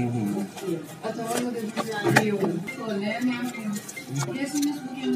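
At 2.67 s, damaged data in the compressed stream makes the decoder misread frames and lose sync, giving a brief blip: a thin broadband streak on the spectrogram and a jagged discontinuity in the waveform.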